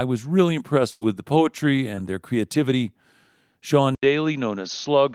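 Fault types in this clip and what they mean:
Burst of packet loss: From 0.91 to 1.04 s, just after "was really", a run of packets arrived too late to play. The receiver stretched the last sound for about 98 ms, fading it into a held buzz or hiss, then jumped ahead. About 100 ms of the speech is simply gone before "the poetry" picks up, so the line skips rather than pauses.
Lost packet rebuilt from error correction: At 1.01 to 1.03 s, and again at 1.97 to 1.99 s between "the poetry" and "their creativity", a single 20 ms packet was lost but recovered from the low-bitrate copy carried in the following packet. Nothing drops out; instead each of these moments sounds coarser and noisier than the audio around it.
Short concealed packet loss: Around 1.95 to 2.00 s, a 20 ms slice never reached the decoder in time. The receiver covered the hole by carrying the preceding sound forward, pitched if voiced and as shaped noise if not, then blended back into the real signal. 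The result is a quick smear or wobble in the speech rather than an audible gap, overlapping the rebuilt packet at that point.
Input switched to a poorer device: At 3.95 s the sound changes character and stays that way to the end. There is an 80 ms silence at the switch, after which nothing above 6.5 kHz comes through, giving a duller, boxier tone, with a new noise floor roughly 45 dB under the speech and little change in loudness. This is likely a change of input to a narrower-band microphone or a headset's call profile.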